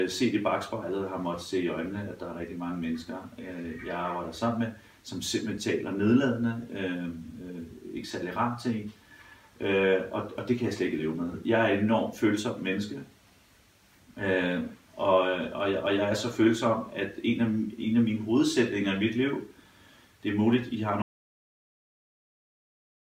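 The sound cuts out abruptly at 21.02 s and never returns. From there to the end, about two seconds, there is an audio dropout to silence, with no room tone at all. Anything after the cut is lost. The likely cause is a lost input, with the recorder still writing silence.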